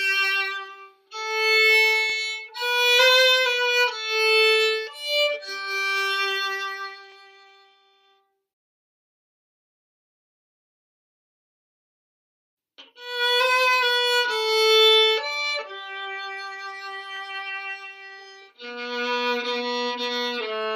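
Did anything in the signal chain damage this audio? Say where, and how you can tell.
Yes. The chunked processing or buffering stage is misaligning its blocks: each new 5-second chunk starts about 23.22 ms before the previous one ends, so that stretch of audio plays twice at the join. You can hear it as a brief click-like stutter at 2.10–2.12 s, 7.12–7.14 s and 17.17–17.19 s, spaced on that 5-second grid. That regular spacing is the signature of overlapping chunks rather than random dropouts.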